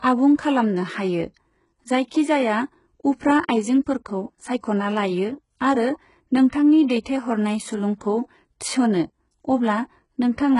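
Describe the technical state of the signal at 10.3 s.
At 10.3 s the speech carries the same damage heard throughout: treble that sounds gritty and lispy on s sounds, with nothing above 11.1 kHz. Likely HE-AAC compression at a rate that fits about 12 kbps, rebuilding highs by copying lower bands upward. Unlike a plain low-pass, the treble is still present but synthetic.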